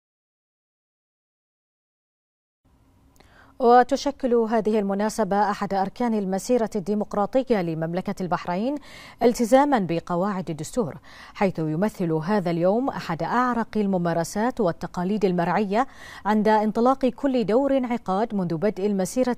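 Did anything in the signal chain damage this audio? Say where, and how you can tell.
No, nothing audible points to damage at any stage of the chain, from the wiring and converter through to storage and playback.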